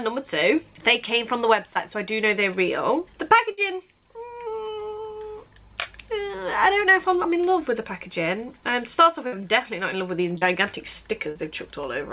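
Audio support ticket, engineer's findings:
Short concealed packet loss at 1.74 s, 10.38–10.43 s and 11.31–11.37 s: brief smears, 20–40 ms missing, jitter buffer/decoder concealment extending the previous sound; spectrogram shows a short smeared patch.

Burst of packet loss at 3.51–3.59 s and 9.27–9.42 s: about 60 ms dropped each, concealment holding the last sound as it fades and then jumps ahead; waveform shows a fading fill and a splice.

Call path consistent with G.711 A-law at 64 kbps, with a spectrogram showing nothing above 4 kHz.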